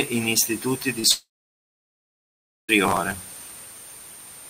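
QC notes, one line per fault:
0.99–1.05 s, short concealed packet loss: a brief smear in the speech, where the sound stretches for an instant instead of moving on cleanly. About 40 ms of audio never reached the decoder in time. The receiver covered nearly all of that gap by extending the preceding sound, then blended back into the real signal. That extension, not a clean cut, is why the moment sounds wobbly rather than like a click or silence.
1.11–2.70 s, long network dropout: the last sound carries on briefly as a fading buzz or hiss, then goes quiet for about 1.4 s before speech returns further along, with the intervening stretch simply absent. This is likely a network outage lasting roughly 1.6 s. The receiver's concealment kept extending the final sound until it faded out, leaving silence, and playback resumed past the part that was lost.
2.85–3.71 s, processor overload crackle: a gritty tearing rides on the speech for nearly a second and stops once that stretch ends. 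Many small audio deadlines were missed in quick succession. Around fifty skips spread over the span fit a buffer of roughly 1.5 ms. Each missed buffer was dropped rather than repeated, so every skip leaves a tiny hard-edged discontinuity, and together they merge into continuous crackle.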